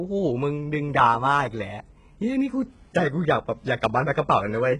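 Speech, and the whole clip has that HE-AAC compression sound: heavy damage, with the top end rebuilt from copied lower bands rather than the real treble, so sibilants come out gritty and metallic, and nothing above 11 kHz. It's likely a very low bitrate, around 12 kbps, that points to HE-AAC v2.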